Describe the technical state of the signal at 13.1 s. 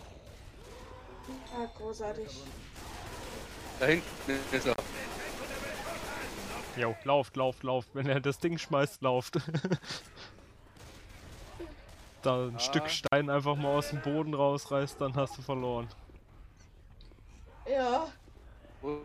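At 13.1 s there is an intermittent contact: a loose cable or plug connection momentarily breaks, so the signal path opens for about 53 ms within a disturbance running from 13.06 to 13.12 s. While the contact is open the programme sound disappears, leaving only a faint hiss from the floating line. Where the contact opens and then remakes, the unclean break produces short crackles at either edge of the gap.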